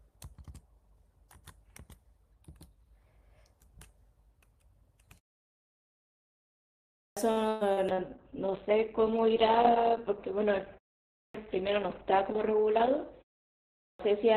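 Clipped start after a pause at 6.83, 11.03 and 13.63 s: after silences of 1.7, 0.32 and 0.48 s, the output path needs time to wake and lock again, so roughly 0.34, 0.31 and 0.36 s of each onset is swallowed. The speech jumps in abruptly, missing its first sounds.

Repeated packet loss, heard as robotic sound, runs from 7.31 to 8.00 s. Four holes appear, the longest about 119 ms, each patched by extending the previous audio. About 37% of that stretch is concealment, giving a choppy texture with pieces of speech absent.

A call bitrate drop begins at 7.92 s and lasts to the end. It fits the encoder being pushed from around 48 kbps down to about 6 kbps, holding its lowest rate for 4.74 s. Bandwidth narrows from 20 kHz to 4 kHz, so the speech turns muffled, rough and watery.

A jitter buffer speed-up from 11.77 to 12.57 s trims an excess backlog by cutting out tiny pitch-period slices repeatedly, around 50 ms in total. 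Speech runs at about 105% speed with unchanged pitch and sounds hurried.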